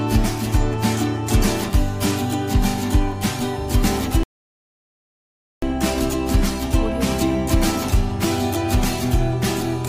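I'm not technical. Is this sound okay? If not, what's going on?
No, there's a rebuffering stall: at 4.23 s playback runs out of downloaded audio, goes silent until 5.63 s, then picks up exactly where it stopped.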